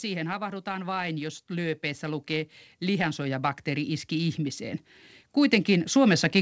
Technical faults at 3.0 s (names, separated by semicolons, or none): automatic gain rising